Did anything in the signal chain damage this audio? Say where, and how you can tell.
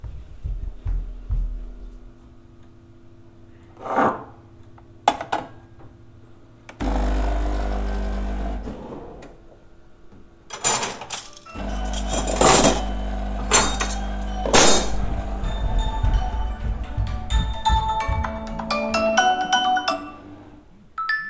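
No, no chain damage heard.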